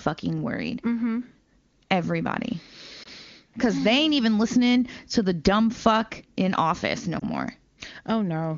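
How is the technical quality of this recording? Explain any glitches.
Two brief glitches break up otherwise clear wideband phone speech, whose bandwidth and clarity fit a high AMR-WB (HD Voice) rate.

Both are lost AMR speech frames, at 3.03 to 3.08 s, just before "because they ain't even", and at 7.19 to 7.24 s, just after "fuck in office no". Each time a single 20 ms frame failed its radio checksum, so the decoder repeated the previous pitch and vocal tract settings at reduced gain. The result is a short dip or warble, not a hard silent gap or click like a network dropout.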